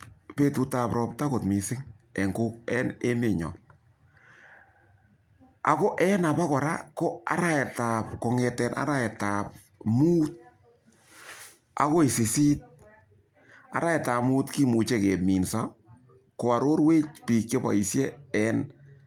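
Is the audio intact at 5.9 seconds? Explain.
Yes, the audio is intact at 5.9 seconds, with no dropout, distortion, glitch or other fault audible at that moment.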